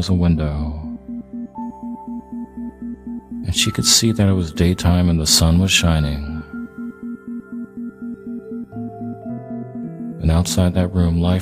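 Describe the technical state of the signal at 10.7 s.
At 10.7 s the pre-emphasis is left on, as it is from 1.62 s to the end at 11.41 s. The 50/15 µs treble lift was never undone, leaving about 8 dB extra at 10 kHz. The sound is thin, bright and hissy. A spectrogram shows extra energy above a few kHz.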